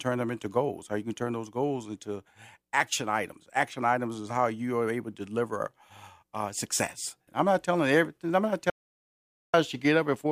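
At 8.7 s the speech cuts off abruptly into an audio dropout to silence lasting about 0.84 s, to 9.54 s. The gap is silent with no room tone, likely a momentary loss of input while recording continued, and whatever was spoken there is gone.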